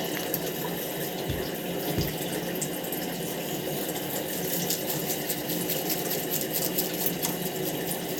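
No technical fault can be heard in this recording of sounds; the signal stays intact and continuous throughout, with no disturbance to report.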